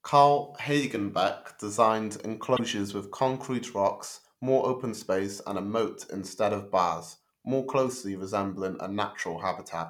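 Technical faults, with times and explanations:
2.56–2.60 s, broken MP3 bit reservoir: a brief 38 ms glitch and jump just before "with concrete rocks more", likely from frames cut from the stream so the next frame borrowed bytes from the wrong place. The waveform shows a discontinuity.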